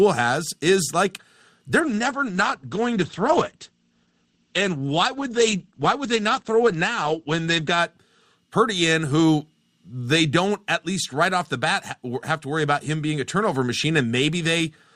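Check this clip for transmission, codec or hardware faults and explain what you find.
There is one transmission fault, an adaptive stream at a lower bitrate, from 1.80 s to 7.80 s, starting just after "has is like". For those six seconds the speech abruptly drops in quality, with more codec artefacts. It then snaps back to full clarity, with no gap at either edge. The stream switched to a lower-quality version while the connection slowed, and the change in character fits Opus falling from about 64 kbit/s to about 12 kbit/s.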